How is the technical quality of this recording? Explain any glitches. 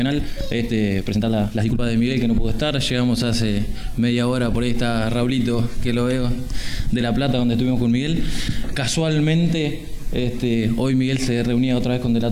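The opening stretch has a problem: the first 1.8 seconds play at about 1.65 times normal pace, with the pitch unchanged. That's a time-stretched section, likely from software squeezing the audio to fit a set length. To keep the pitch steady it cuts out short slices and butts the remaining ones together, so this part sounds rushed. At 1.8 s the pace drops abruptly back to normal.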